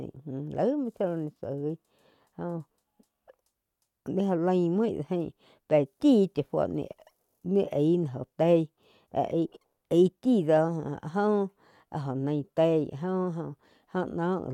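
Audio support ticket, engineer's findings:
Listened through the speech recording and nothing stood out as a problem anywhere in it.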